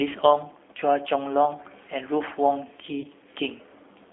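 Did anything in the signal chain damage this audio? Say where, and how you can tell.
Yes. The G.729 codec, at the codec stage, damages the whole clip. The speech has a slightly rough, synthetic edge, and the damage is plainly audible. That roughness fits an 8 kbit/s coder that rebuilds each 10 ms frame from a vocal-tract filter, a pitch predictor and a few pulses. A spectrogram shows energy confined to roughly 250 Hz to 3.5 kHz, with nothing above the 4 kHz ceiling and smeared harmonics between formants.

VoIP packet loss concealed by the speech codec occurs at the network stage, from 3.01 to 3.07 s. About 30 ms of speech is missing, which fits a single lost packet. The decoder fills the gap by repeating its last pitch and filter at falling gain, so the sound is briefly stretched and fades. Because each frame builds on the one before, the distortion continues a little past the gap. The waveform shows a short, decaying stretch there.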